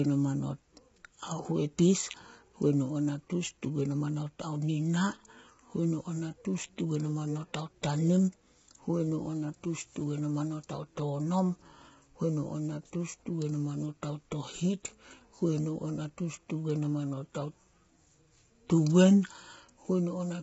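From start to finish the voice sounds rough and grainy, with a hiss-like fill between the harmonics and nothing at all above about 7.7 kHz, so the top end is dull. The likely cause is heavy low-delay AAC compression such as AAC-ELD, which fits a bitrate of around 16 kbps. Its very short frames cannot resolve the pitch harmonics finely, and the few bits left smear noise between them.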